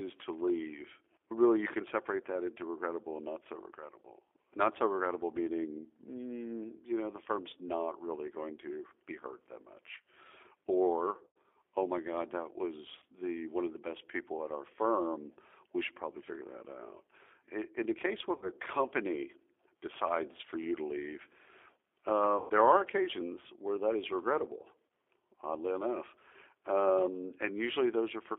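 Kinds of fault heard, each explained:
G.729 codec: The whole clip runs through this 8 kbit/s VoIP codec, which rebuilds speech from a tract filter, pitch predictor and a few pulses per frame. The voice sits in a 300 to 3500 Hz line band and sounds clearly rough and synthetic.
VoIP packet loss concealed by the speech codec: Five dropouts, at 11.27, 12.99, 18.36 (after "in the case where"), 22.38 and 24.87 s, lasting 30 to 150 ms. The decoder stretches the last sound into a fading buzzy tone or coloured noise, and the voice stays weak briefly after each one.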